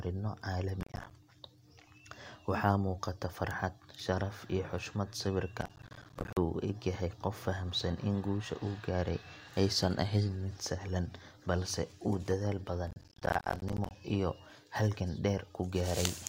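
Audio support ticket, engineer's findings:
Processor overload crackle: CPU missing audio buffer deadlines in short runs, each missed buffer output as silence, gaps fitting buffers of around 10 ms. Heard as gritty crackle tearing through the speech at 0.81–1.11 s, 5.61–6.37 s and 12.87–13.95 s.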